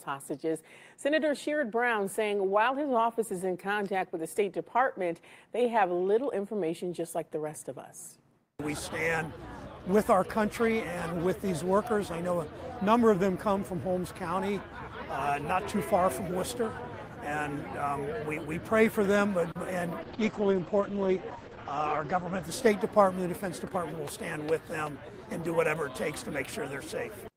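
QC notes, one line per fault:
19.51 to 19.57 s: short stall from a late packet. A packet arrived late and the jitter buffer ran dry. The receiver held the last sound for about 40 ms rather than skipping ahead. When the packet came, playback resumed from the same point. Nothing is lost. The sound is briefly stretched, with a faint buzz or dip where the held piece sits. The playout delay grows by those 40 ms.
20.03 to 23.33 s: call bitrate drop. The bandwidth estimate fell and the encoder was pushed to spend far fewer bits. The change in sound points to a fall from around 32 kbps to about 11 kbps. The audio band shrinks from roughly 20 kHz to 8 kHz. The top end goes missing and the sound turns muffled and coarse. It is at its worst for about 2.03 s, then recovers.
21.83 to 22.66 s: jitter buffer speed-up. The buffer held more audio than its target, so the receiver trimmed it. It cut many short pieces, each one or a few pitch periods long, removing about 40 ms in total. 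Playback runs at 104% speed with the pitch unchanged. It overlaps the bitrate drop, so both effects are heard together.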